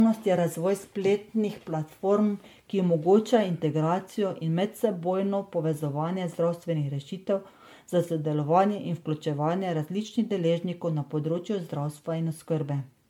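From start to finish the speech has that swirly, hollow, smeared quality of generation loss, likely from re-encoding around seven times as MP3 at what sounds like 96 kbit/s. Each pass stacks fresh quantisation noise, attacks blur, and nothing survives above 19.9 kHz.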